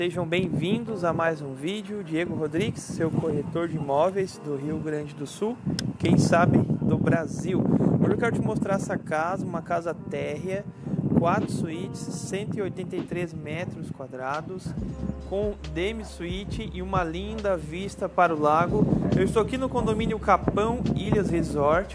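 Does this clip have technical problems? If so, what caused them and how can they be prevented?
No technical faults are audible.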